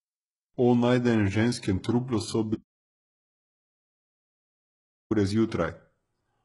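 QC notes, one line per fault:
throughout: HE-AAC compression, likely, since treble up to 11.1 kHz is rebuilt from lower bands and heavy artefacts leave sibilants gritty and metallic, fitting roughly 12 kbps.
2.55–5.11 s: audio dropout to silence right after "najdenem ženskem truplu so"; about 2.56 s of silence with no room tone, likely lost input while recording continued.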